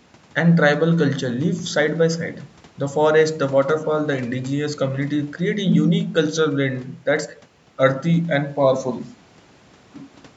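No technical faults are audible.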